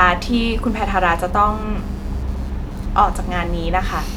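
A faint, rapid buzzing chirp runs under the speech for the whole clip, pulsing around 150 times a second and sitting roughly 35 dB below it. This is computer activity noise: changing load in the computer disturbs the ground shared with the audio circuit.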